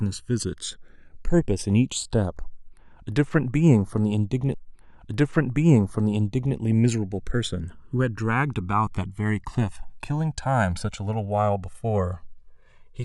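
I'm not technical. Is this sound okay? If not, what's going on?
No. Throughout the recording the channels are drifting apart. The left and right sides come from two devices whose clocks run very slightly differently, so one side slips further behind, reaching roughly 2 ms by the end. Heard together, this gives a slow, swirling, whooshing quality to the speech.

There is also a stream segment repeated from 4.53 to 6.55 seconds. The player fetched the same chunk twice, so about 2 seconds of speech plays a second time, with a small blip where it jumps back.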